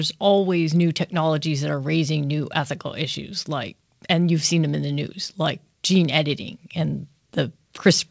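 Speech arrives over what sounds like a normal call connection, its band ending at about 8 kHz as a wideband codec such as G.722 would leave it, and no technical fault can be heard in the signal.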